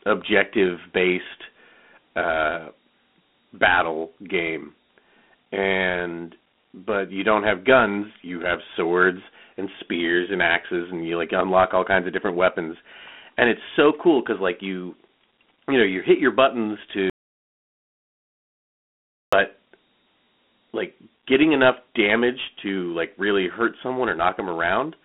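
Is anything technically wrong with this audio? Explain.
Yes, there are two problems. Throughout the speech there is a gritty hiss riding on every syllable, and the sound is confined to a narrow phone band of roughly 200 Hz to 3.5 kHz, with nothing above 3.9 kHz. This is Dialogic VOX ADPCM: each sample is coded as a 4-bit step, which fits a 32 kbps stream at 8,000 samples a second, and the coarse steps leave that grainy noise.

From 17.10 to 19.33 s, right after "you hit your buttons", the audio drops out to silence for about 2.23 s. The gap is total, with no room tone, and then the speech resumes mid-flow. This is likely an audio dropout to silence, where the input was lost while the recorder kept writing silence, so whatever was said in that stretch is gone.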